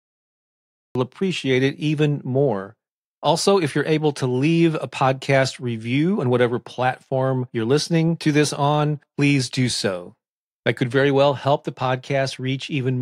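The clip opens with a cut-off start: the first 0.95 s is digital silence, and at 0.95 s the speech begins abruptly, already partway through an utterance, just before "appreciate it even more". The capture or stream started late, so the beginning of this sound was never recorded. On a waveform this appears as a flat line ending in a sudden jump to the speech level, with no rising attack. On a spectrogram a blank region gives way to energy at a sharp vertical edge.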